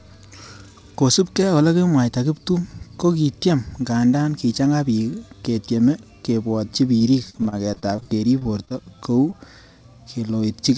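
From 6.98 to 9.34 s, right after "ketyeme kebwotchi", the speech turns choppy and robotic. This is repeated packet loss: 16 short gaps, the longest 38 ms, each patched by stretching the preceding sound, so about 13% of the stretch is concealment. The band stops at 8 kHz, which fits a G.722 call path.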